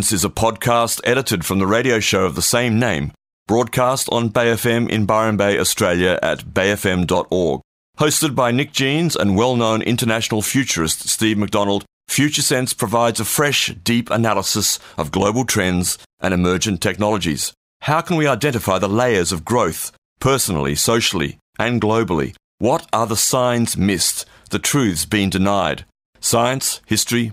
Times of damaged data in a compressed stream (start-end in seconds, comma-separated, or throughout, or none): none